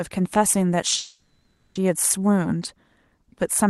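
A call audio freeze interrupts this speech recording from 0.97 to 1.77 s. For about 0.8 s the speech stops and the last sound is drawn out as a fading buzz or hiss, ending in roughly 130 ms of silence before the talker resumes exactly where they left off. Nothing is lost; the clip is simply pushed 780 ms later. This is likely caused by packets stalling in transit and draining the jitter buffer. The call codec limits the band to about 12 kHz throughout.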